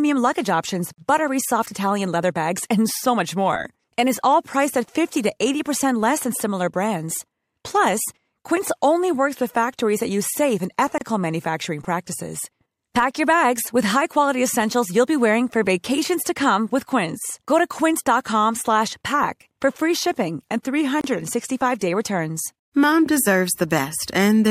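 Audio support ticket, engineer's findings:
Gap at a join of encoded pieces: gaps with smeared edges at 0.93–0.98 s (49 ms, between "luggage options" and "buttery soft") and 21.01–21.04 s (31 ms, after "for free shipping and"). Separately encoded pieces were joined without trimming encoder delay or padding.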